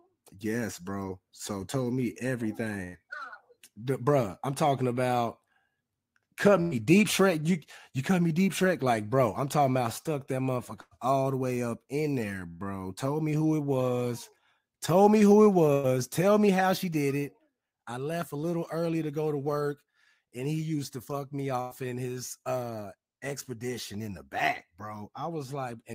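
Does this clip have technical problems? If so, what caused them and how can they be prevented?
Yes. Six bursts of packet loss occur, at 2.83, 6.61, 10.81, 12.49, 15.73 and 21.61 s. In each, about 100 ms of audio is a concealment fill: the receiver stretches the last sound into a buzz or hiss that fades. Then the sound picks up again with about 60 ms skipped, and playback falls about 40 ms further behind. That held, fading tail is what separates it from a plain dropout, which would fall to silence. Forward error correction or redundant packets, and a less congested network path, would prevent it.

A jitter buffer speed-up follows three of the bursts, from 3.03 to 7.03 s and from 10.97 to 16.99 s at about 102% speed, and from 21.84 to 22.17 s at 110%. The receiver trims short pitch-period slices to work off the delay the bursts built up. The trims total roughly 70 ms, 150 ms and 40 ms. The speech runs faster, sounding hurried in the 110% stretch, but keeps its pitch, which distinguishes this from resampling or a clock mismatch. 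Steadier packet delivery would leave the buffer nothing to catch up on.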